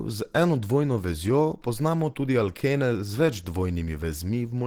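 Speech, with plainly audible Opus compression throughout, likely from a hybrid-mode encode around 16 kbps. It sounds muffled and hoarse rather than swirly like MP3, and content still reaches about 20.2 kHz.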